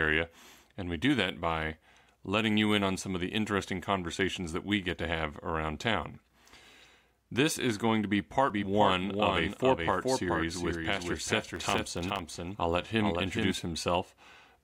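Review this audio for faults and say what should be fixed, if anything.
From 8.50 to 13.52 s, just after "is going to be", a doubled audio track appears. A full-band copy about 5 dB quieter trails the original by around 400 ms and starts and stops abruptly. Its likely cause is a second, slower capture path or a misaligned edit. On a spectrogram the same patterns repeat, shifted right, with hard vertical edges where the copy begins and ends. Prevent it by monitoring or muting one of the routes so each source is recorded only once.

From 11.51 to 12.35 s there is processor overload crackle, a gritty tearing riding on the sound. The processor missed a run of audio deadlines, and each one left a tiny hole of silence. The dropouts are very short, under a millisecond each, which points to a small buffer size. On the waveform the gaps show as brief drops to near silence, and on a spectrogram as thin broadband vertical streaks. 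Prevent it by raising the buffer size or reducing the processing load during recording.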